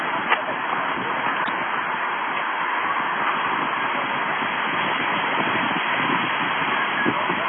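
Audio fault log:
Throughout, AAC compression: nothing above 3.5 kHz, dull and smeared with fizzy warbling. Likely heavy AAC-LC coding, which fits a bitrate near 16 kbps.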